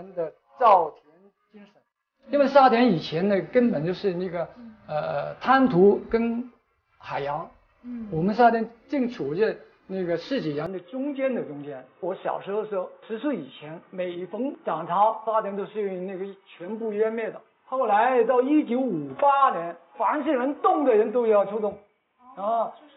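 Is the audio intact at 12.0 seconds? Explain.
No. From 10.66 s to the end, the sound turns dull and boxy, with nothing above 3.8 kHz, about 5 dB quieter, and a faint new noise floor, with no gap at the change. This is likely an input switched to a poorer device.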